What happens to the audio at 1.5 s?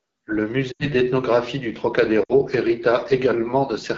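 At 1.5 s, the speech carries the AMR wideband (HD Voice) codec damage that runs through the whole clip. The roughness is plainly audible and points to one of the codec's two lowest modes, likely 8.85 kbit/s. At that rate, the pulse-driven vocal tract model has too few bits to shape each frame accurately. Voiced sounds turn rough and raspy. Above 6.4 kHz, only synthetic noise fills the band.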